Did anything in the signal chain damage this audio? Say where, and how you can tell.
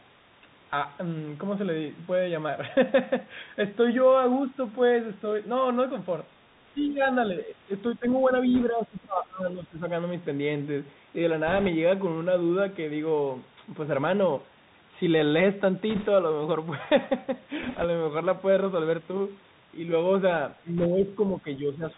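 Yes. At the codec stage, the whole clip runs through a Bluetooth CVSD headset codec at 64 kbit/s: nothing above 4 kHz survives, s sounds come out scratchy, loud high passages distort as the one-bit delta steps fail to keep up, and a granular hiss sits under the speech.

In call processing, the speech dips at 6.76 to 6.96 s by about 5 dB, again from 7.95 to 9.86 s by about 20 dB over roughly one and a half seconds, and from 20.63 s to the end by about 10 dB. This pattern is likely speech suppressed in double talk, with the echo canceller ducking the talker while the far side spoke.

On the radio link, bit errors on a Bluetooth voice link add short bursts of rushing crackle without loud clicks, because no CVSD bit outweighs the others and each error dies away fast, though it grows with the speech level. They fall at 8.55, 11.47 to 11.68, 15.90 to 16.07, 17.63 to 17.85 and 20.78 to 20.86 s. 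The burst at 8.55 s is lighter, near 1.5% errors, and the rest are near 3%.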